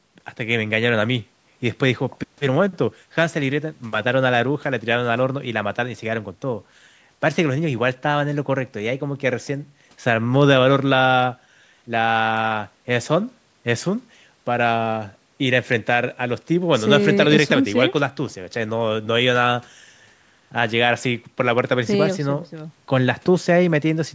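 No technical faults occur anywhere in this speech clip.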